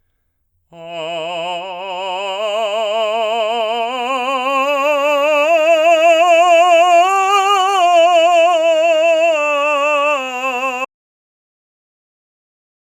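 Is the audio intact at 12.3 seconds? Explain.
No: an audio dropout to silence runs from 10.85 s to the end, likely lost input written as silence; the music stops dead, showing a flat waveform and a blank spectrogram.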